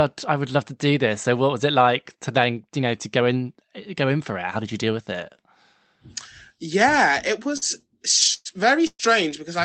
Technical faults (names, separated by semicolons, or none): repeated packet loss (robotic sound)